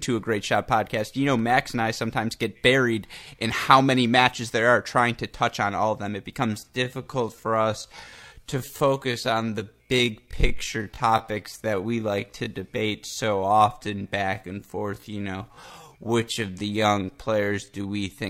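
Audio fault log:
6.42–18.24 s, time-stretched section: the pace abruptly slows to 0.645x while pitch holds, leaving a drag starting just before "are going to break". The likely cause is software stretching the audio to fit a length by repeating short pieces.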